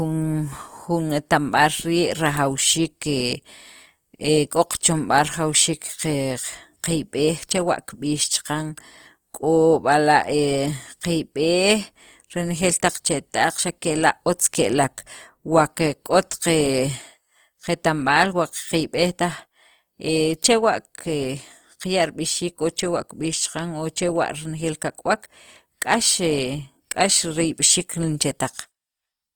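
Coding damage is plainly audible throughout the speech. It sounds rough and grainy, with a noisy texture where fine detail should be. The band stays full, reaching 20.2 kHz. This is likely Opus compression in its music mode, at a rate near 24 kbps.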